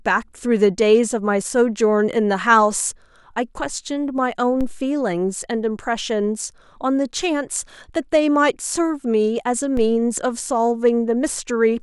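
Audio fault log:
4.61 s, 9.77 s: DC step. The zero line of the waveform jumps abruptly by about -18 dBFS each time, then drains away through a 2 Hz high-pass over a fraction of a second, so each jump lands as a brief low thump while the speech carries on unchanged.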